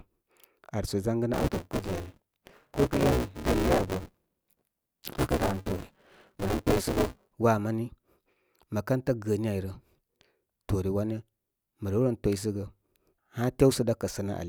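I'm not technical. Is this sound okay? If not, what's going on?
No. From 1.33 to 7.34 s there's buffer tearing: half of each tiny chunk replays older audio, making a steady robotic buzz, not random clicks, heard only during speech.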